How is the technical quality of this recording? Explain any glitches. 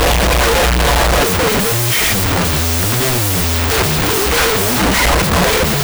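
The technical quality is poor: one fault runs through the whole recording. Wrong sample width, throughout: 16-bit samples are being read as unsigned 8-bit, so each byte becomes its own value. Half are meaningless low bytes, giving loud hiss over a buried voice, playing at half speed and an octave low.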